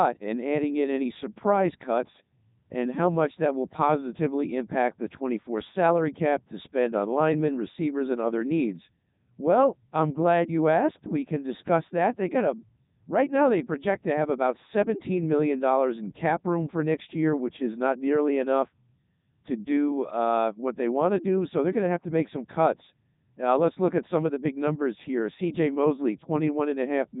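From start to finish the speech carries Codec 2 vocoder damage, and it is heavy. The decoder rebuilds each voice from sine waves driven by pitch, voicing and an energy envelope, so the original waveform is gone and delivery turns robotic and buzzy. Nothing survives above 3.8 kHz, and the sound fits the 3.2 kbit/s mode. A narrowband phone filter or low-rate waveform codec would dull or smear a real voice; here the voice itself sounds synthetic.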